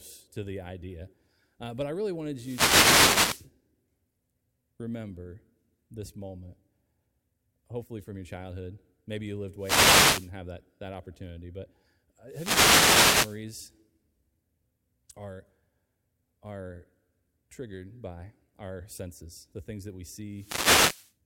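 Speech recorded through an analogue FM radio microphone whose signal repeatedly fades as reflections cancel it, letting receiver noise rise in wireless microphone noise hits: bursts of static swish over the voice at 2.34–3.51 s after "but I really", 9.57–10.32 s between "you lived" and "have that that opportunity", 12.27–13.44 s, and 20.31–21.14 s after "the things that we".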